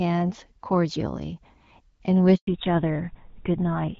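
At 2.35 s the speech cuts out for a handover gap of 120 ms, lasting until 2.47 s. The call is being passed from one network to another. No speech frames arrive during the switch. The sound fades quickly and goes silent, and whatever was said then is lost.

From 2.47 s to the end there is a fallback to narrowband. Before the gap, the speech carries the brighter HD Voice band, which fits AMR-WB at 12.65 kbit/s with light coding damage. Afterwards nothing is left above 4 kHz. The speech turns duller and rougher, which fits GSM full rate at 13 kbit/s.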